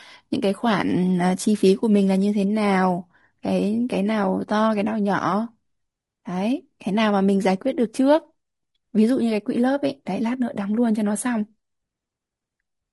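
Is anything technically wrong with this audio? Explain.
Yes. Throughout the speech there is what sounds like low-delay AAC compression, likely AAC-ELD of the kind used in video calls, with damage that fits a bitrate around 32 kbps. The codec works in very short frames, which cannot separate the pitch harmonics of a voice cleanly and spend bits inefficiently. The result is plainly audible: the voice comes across rough and grainy, with noise filling the gaps between harmonics.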